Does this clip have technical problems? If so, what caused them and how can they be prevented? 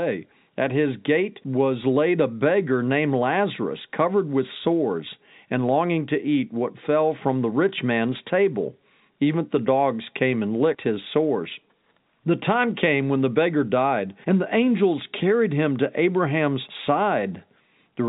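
No, nothing in this speech clip stood out as a technical problem on listening.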